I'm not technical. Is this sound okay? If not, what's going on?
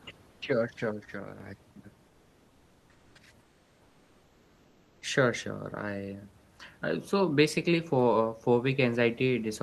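No. In the pauses at 0.31 to 0.41 s, 2.07 to 3.15 s and 3.41 to 5.01 s, the real room sound is swapped for comfort noise in place of the background: a flat, slightly quieter hiss. The likely cause is the sender going silent between phrases while the receiver fills in fake noise.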